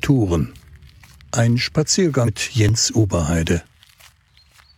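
At 2.23 s a short glitch lasts about 60 ms, to 2.29 s. This is damaged data in a compressed stream: corrupted bytes there made the decoder misread frames, lose sync and resume at the next valid frame header.

At 2.69 s there is a tiny skip, with a small sliver of sound gone and the two sides butted together without any gap. This is most likely audio missing between chunks, where a fraction of a second is dropped during the handover from one 2-second processing block to the next.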